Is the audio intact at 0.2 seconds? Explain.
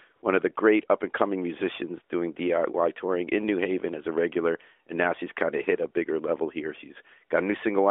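No. From 0.16 to 0.22 s, just before "one of the great", there is a stretch of AMR comfort noise. For about 60 ms the phone treated the sound as silence and sent no speech frames, so the receiver filled the gap with smooth synthetic noise built from a rough level and spectrum estimate. It sounds like a brief, steady hiss replacing the real background. On a spectrogram it shows as a flat, featureless band, and on the waveform as an even, low-level stretch.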